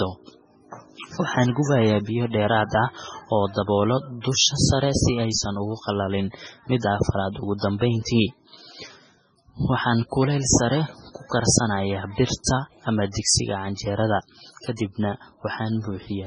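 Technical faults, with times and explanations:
Throughout: MP3 compression. The sound is watery and swirly, with a metallic chirping on s sounds, soft, smeared consonant onsets, and no content above 10.2 kHz. The likely cause is heavy MP3 encoding at a very low bitrate, consistent with roughly 16 kbps. Short of bits, the encoder cuts the treble at a fixed frequency and zeroes weak spectral lines. Those lines drop in and out from frame to frame, which produces the swirling texture.
8.04–8.07 s and 12.44–12.47 s: pre-echo. Each time, a short hiss of about 31 ms runs ahead of a sharp attack, which then lands softened. The second one comes just before "ama digsiga canjerad kadibna". The codec spreads quantisation noise evenly across its transform block. When the attack sits late in that block, noise scaled to the loud part also fills the quiet moment before it and becomes audible there.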